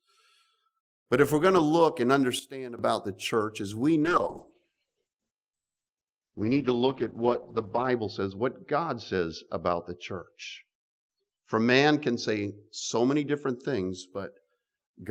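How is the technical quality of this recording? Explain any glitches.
The recording has two clear problems, one brief and one that lasts most of the clip.

First, a sudden gain jump from 2.39 to 2.79 s. The level drops by about 12 dB all at once, with the background falling right along with the sound, then snaps back. The likely cause is a digital gain change applied in a single step instead of being ramped, so there's no fade, just an abrupt step down and back up again.

Then, from 4.04 to 14.17 s, there's a call bitrate drop. The encoder's rate falls from 32 kbps to 8 kbps, and it stays at its lowest for about 3.9 s of that stretch. With so few bits, Opus codes everything more coarsely and narrows the bandwidth from 20 kHz to 8 kHz. That's why the sound goes dull and muffled, with a rough, watery edge, until the bitrate recovers.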